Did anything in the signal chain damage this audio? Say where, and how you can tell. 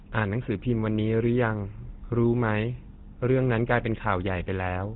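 Yes. The damage comes from the codec stage, and it runs through the whole speech clip: this is the GSM full-rate codec. The audio stops dead at 4 kHz, and the voice carries a plainly audible buzzy, gravelly grain. That grain comes from the coder rebuilding the vocal tract from a sparse pulse excitation, which fits the 13 kbps full-rate mode. A simple low-pass filter or band-limited phone line would sound dull but smooth, with no roughness layered onto the voice.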